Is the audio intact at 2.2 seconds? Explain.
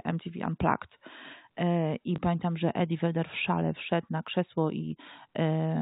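No. Packet loss with last packet repeated occurs at 2.16 to 2.18 s, just before "pamiętam że": about 20 ms went missing, which fits one lost packet, and the previous packet was replayed, giving a small blip.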